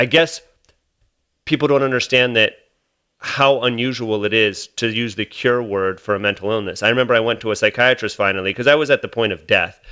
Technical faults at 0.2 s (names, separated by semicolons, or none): none